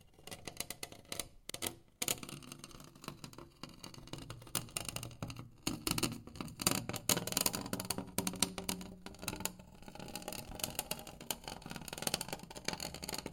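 At 1.50–1.55 s, 3.55–3.59 s and 7.64–7.69 s, overlapping chunks make about 48 ms of sound play twice as each 2-second block begins before the previous one finishes. Unlike a dropout, nothing goes missing. The repeated slice gives a brief stutter at each join.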